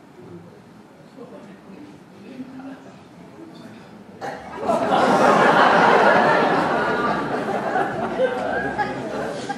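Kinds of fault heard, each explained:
Train of clicks: a burst of about seven short, similar pulses from 4.83 to 6.34 s, arriving at an uneven pace of roughly 4 per second and standing well above the sound, likely from interference or a faulty connection; spectrogram shows thin vertical broadband lines, waveform sharp isolated spikes.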